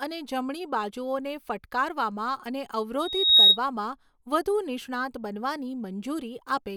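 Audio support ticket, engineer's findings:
Loudspeaker feedback squeal, 3.00–3.58 s. Single tone near 3.8 kHz swells over roughly 0.4 s to well above the speech, about 15 dB over. Mic is picking up its own loudspeaker. Loop gain exceeds unity at that frequency, so it builds until the amplifier limits it or the loop breaks.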